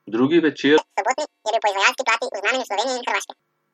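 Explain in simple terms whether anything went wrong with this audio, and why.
Audio read two samples at a time (double speed) runs from 0.78 to 3.40 s. The speech there plays twice as fast and a full octave higher, because the player treated each pair of samples as a single step, racing through the recording.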